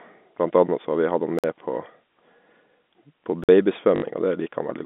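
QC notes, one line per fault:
1.39–1.44 s and 3.44–3.49 s, gap between chunks: two 50 ms silent holes, the first right after "har vi hatt han", recurring at a 2.0 s spacing. The audio arrives in fixed 2 s blocks with silence left between them, leaving dead air at every join though nothing is dropped.
3.96–4.02 s, packet loss with last packet repeated: a 60 ms robotic stutter, which fits three lost 20 ms packets. The receiver replayed the last good packet to fill the hole. Because each repeat restarts out of step with the pitch cycle, the run takes on a buzzy, mechanical texture.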